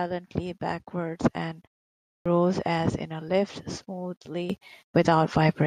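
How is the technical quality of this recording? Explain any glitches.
There is one audible glitch. Clipped start after a pause at 2.09 s: after 0.5 s of silence the output wakes late and loses 0.17 s, so "as in a lift" begins abruptly without its opening sound.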